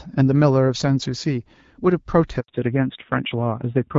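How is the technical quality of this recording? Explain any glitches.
The recording has two linked faults in the second half: a short break in the speech, then a lasting loss of bandwidth. Before that, the wideband codec sounds clear with light coding damage, which fits AMR-WB at about 12.65 kbit/s.

At 2.40 to 2.48 s there is a handover gap of 80 ms. While the call moved between networks, no speech frames arrived, so the voice dies away and leaves plain silence. Unlike packet-loss concealment, nothing is smeared or repeated to fill the hole.

From 2.48 s to the end, the call falls back to narrowband. The network switched from HD Voice to an older narrowband codec, which sounds like AMR-NB at about 7.4 kbit/s. Nothing above 4 kHz remains, and the voice turns duller and rougher. A simple low-pass filter would only muffle the voice. Here the added coding roughness and the abrupt onset right after the gap point to a codec change.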